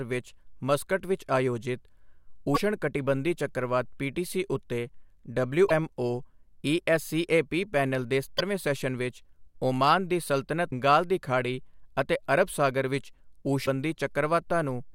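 Short glitches cut through this speech clip four times, each lasting roughly 55 ms: 2.52–2.58, 5.66–5.71, 8.35–8.41 and 10.67–10.73 s. They come from damaged data in a compressed stream, where corrupted bytes make the decoder misread frames and lose sync until it finds a valid frame header.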